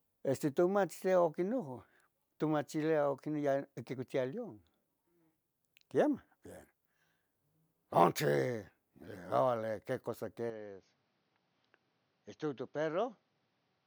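At 10.50 s the speech abruptly loses its top end and stays that way to the end of the clip. Nothing above 6.5 kHz survives, the level drops by roughly 5 dB, and a faint new background noise, around 40 dB under the speech, appears. There is no gap at the transition. The likely cause is an input switched to a poorer device partway through, one with a narrower band, its own tone and its own noise floor.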